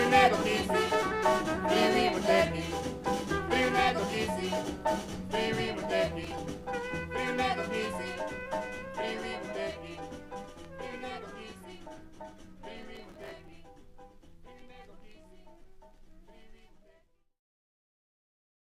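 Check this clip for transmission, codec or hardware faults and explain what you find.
Processor overload crackle appears twice, from 6.24 to 6.38 s and again, longer, from 12.78 to 13.53 s. The processor fell behind on its very short audio buffers, which sound like a few milliseconds each, and missed deadlines in a row: a handful in the first burst, a few dozen in the second. Each miss replayed a scrap of old audio with hard edges, giving a gritty, tearing crackle. Unlike network dropouts, the disruptions are tiny and dense, not longer isolated gaps.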